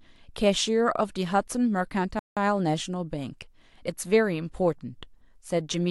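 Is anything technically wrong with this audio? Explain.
Yes. From 2.19 to 2.37 s the speech cuts to silence for 175 ms, a Bluetooth stall. The likely cause is interference holding up packets until the headphones' buffer ran empty. Unlike a brief concealment glitch, the audio stops completely.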